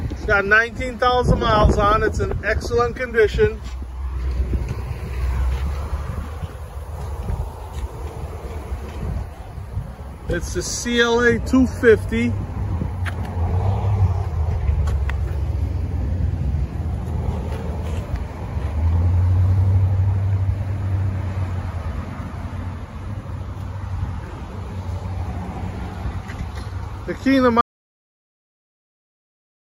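At 27.61 s the sound cuts off mid-flow and stays silent for the last 2 seconds, an audio dropout to silence. The input was likely lost while recording continued. Unlike a fade or noise gate, the cut is instant and leaves no room tone.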